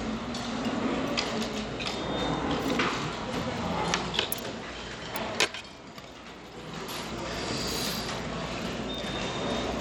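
From start to finish the audio carries plainly audible Bluetooth SBC compression damage, likely from a starved SBC link, with the grain and dull top end pointing to a bitrate around 96 kbps. The codec splits the signal into a few broad sub-bands, and with so few bits the upper bands go hungry: treble flickers in and out, and gritty noise and aliasing ride over the everyday sounds. On a spectrogram the top region looks patchy and blocky, with holes appearing and vanishing from frame to frame.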